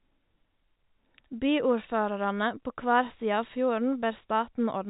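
The clip is speech carried through G.711 telephone coding with nothing above 3.8 kHz, and nothing is technically wrong with it.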